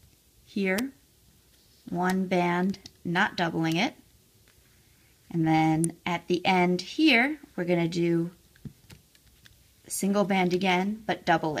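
At 0.78 s and again at 5.84 s there's a sharp snap on top of the sound, likely an electrical switching spike from a nearby switch or motor arcing into the line.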